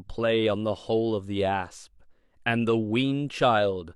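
No technical faults are audible.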